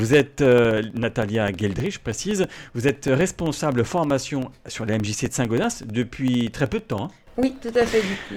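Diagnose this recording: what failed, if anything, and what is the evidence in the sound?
Driver or buffer stage: periodic USB or driver dropouts. From 0.07 s to 8.26 s there's a steady tick every 64 ms, about 150 in all. Each is roughly a millisecond dropped to silence as something stalls the USB bus or driver on a timer.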